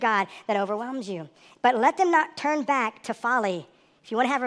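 A short speech recording plays back too fast and too high from start to finish. It has a wrong sample rate. Everything runs 1.38 times faster, and pitch rises by 5.55 semitones together with speed. That ratio fits audio captured at 16 kHz but played at 22 kHz without conversion.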